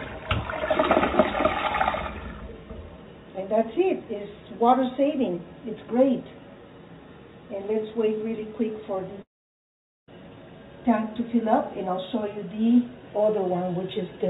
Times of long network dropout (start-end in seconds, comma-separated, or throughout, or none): 9.22-10.09